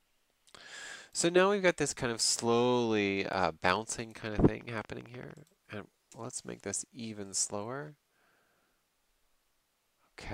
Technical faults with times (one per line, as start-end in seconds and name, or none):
3.41-5.32 train of clicks